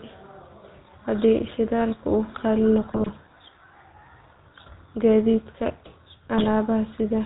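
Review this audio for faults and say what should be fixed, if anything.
GSM full-rate codec coding runs through the whole speech clip: a buzzy, gravelly roughness with nothing above 4 kHz, consistent with a 13 kbps full-rate coder that models the vocal tract and drives it with sparse, regularly spaced excitation pulses. To prevent it, route the call over a wideband codec such as AMR-WB rather than full rate.

GSM bit errors appear from 2.83 to 3.11 s and again from 6.38 to 6.51 s as squawks, pops and gargling. Corrupted filter, pitch or gain parameters reach the decoder on a weak radio link, distorting the spectrum or level of affected frames. To prevent them, improve link quality or enable stronger channel coding and bad-frame concealment.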